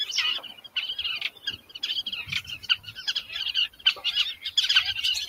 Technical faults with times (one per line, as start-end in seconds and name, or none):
0.00-5.28 noise suppressor applied to music or sounds
0.41-0.76 sound cut by the noise suppressor
1.30-1.80 sound cut by the noise suppressor
2.61-3.01 sound cut by the noise suppressor
3.68-4.03 sound cut by the noise suppressor
4.35-4.51 sound cut by the noise suppressor